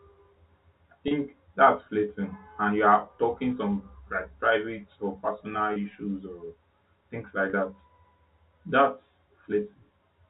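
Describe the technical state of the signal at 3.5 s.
At 3.5 s the speech comes through intact, carried in the narrow telephone band of G.711 coding with nothing above 4 kHz and only a faint hiss tracking its level.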